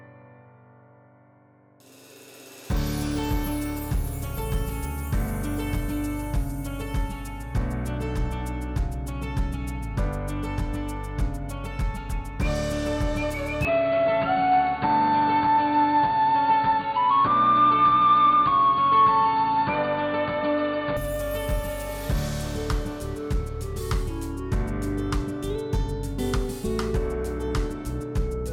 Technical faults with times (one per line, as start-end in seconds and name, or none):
13.65-20.97 input switched to a poorer device